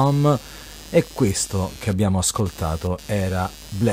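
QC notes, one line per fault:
throughout, computer activity noise: a buzzing, chirping pulse at roughly 150 Hz sits about 20 dB below the speech, following the machine's activity rather than the speech itself. Processor or other computer load changes are shifting the shared ground of the audio circuit.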